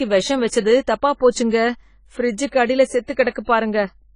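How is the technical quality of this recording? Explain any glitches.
The recording is noticeably degraded by AAC compression throughout. Nothing sounds above about 10 kHz, and the speech has a dull, smeared, fizzy warble, likely from AAC-LC at a low bitrate (around 24 kbps). The codec shapes its quantisation to a hearing model and drops bands it can't afford. Unlike a plain low-pass filter, it adds swirling artefacts and holes within the remaining band.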